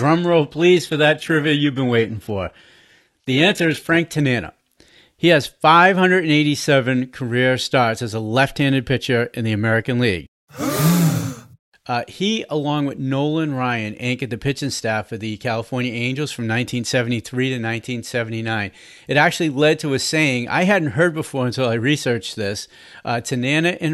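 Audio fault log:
0.0–4.0 s, adaptive stream starting at a low bitrate: the speech opens dull and smeared, with synthetic-sounding treble typical of spectral band replication, then sharpens abruptly at 4.0 s with no gap. This points to a quick-start rendition near 16 kbit/s HE-AAC before the player stepped up to roughly 96 kbit/s AAC-LC.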